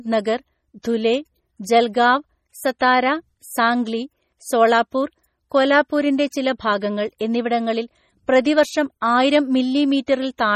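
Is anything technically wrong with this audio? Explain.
Yes. Throughout the speech there is heavy MP3 compression damage. Nothing remains above 15.9 kHz, and weak frequency lines switching on and off between frames produce a watery, swirly texture. This likely comes from a very low bitrate, around 32 kbps.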